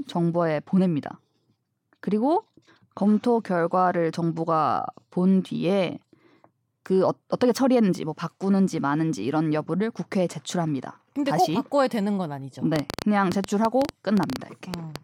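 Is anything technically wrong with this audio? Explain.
Yes. From 12.76 to 14.97 s a train of clicks sits over the speech: around twenty similar pulses, about 8.2 per second at uneven spacing, peaking well above the speech level. The likely cause is interference from nearby equipment or a faulty connection or power supply, heard as irregular ticking.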